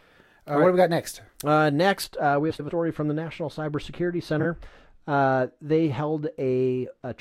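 From 2.04 s to the end, a treble cut meant to undo pre-emphasis was applied where none was needed: de-emphasis applied wrongly. The response slopes steadily downward above the midrange, sitting about 14 dB lower at 10 kHz than at 1 kHz. The speech turns dull and muffled, with sibilants and consonant edges losing their crispness.

Two stretches show frames out of order, where adjacent runs of coded frames were decoded in swapped sequence. At 2.50 to 2.70 s, two blocks of about 93 ms each play exchanged, which suggests runs of four frames. The result is a garbled flutter.

At 4.40 to 4.46 s, two blocks of about 23 ms swap places, which fits single frames. This one is briefer, a quick garbled flutter. Neither swap shortens the clip.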